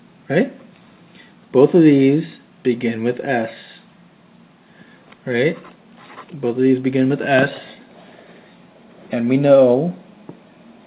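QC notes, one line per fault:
Nothing to flag here, just the ordinary sound of a WebRTC call path, where the G.711 A-law codec at 64 kbps leaves nothing above 4 kHz, as it normally does.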